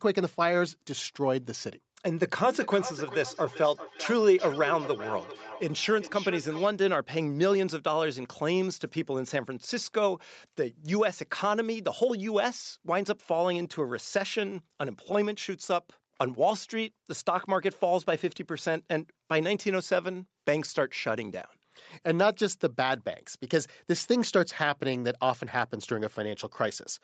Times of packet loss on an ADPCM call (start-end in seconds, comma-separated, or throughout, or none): none